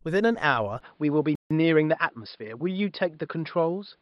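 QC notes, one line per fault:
0.80–4.01 s: input likely switched to a poorer device. From 0.80 s the speech turns duller, with a faint new noise floor roughly 45 dB below the signal. There is no gap at the change and no obvious level shift, consistent with a narrower-band microphone path taking over.
1.35–1.51 s: playback stall. The speech cuts to silence for 153 ms in mid-flow. A sudden hole of this kind is what the output produces when it is starved of data, likely a player underrun or a briefly blocked audio thread.
1.51–2.53 s: time-compressed catch-up. Immediately after the stall the speech runs about 1.15 times faster for roughly a second, at normal pitch. Short slices are being dropped and cross-faded so the player can clear the backlog from the stall.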